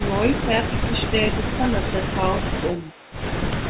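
Speech over a narrowband call path, with nothing above 4 kHz, which fits G.711 A-law at 64 kbps. It shows two faults. Speech suppressed in double talk is heard as level dips in the talker's speech at 0.28–1.17 s (about 10 dB, pulled down in pieces over roughly half a second), 1.36–1.64 s (the deepest, about 15 dB), 1.81–1.96 s and 2.40–2.63 s (about 10 dB each). The likely cause is an echo canceller that, while both sides spoke at once, could not tell the near talker from loudspeaker echo and attenuated everything. From 2.74 to 3.16 s an echo leak follows: a faint copy of the speech, about 25 dB below it, trails the original by 421 ms. The likely cause is a far end on loudspeaker whose echo canceller left part of its microphone pickup uncancelled and sent it back.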